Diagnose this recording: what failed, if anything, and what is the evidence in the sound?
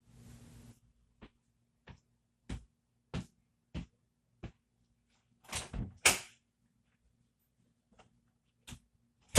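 Throughout, the top end is dull and the sound has a gurgling, granular roughness, with upper bands flickering in and out. The fault sits at the codec stage, likely MP2 compression at a rate near 80 kbps: Layer II switches off upper sub-bands and coarsely quantises the rest.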